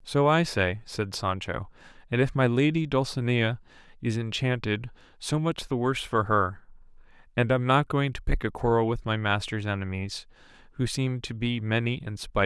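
Nothing technically wrong turns up anywhere in this speech recording, so there's no fault to point to here.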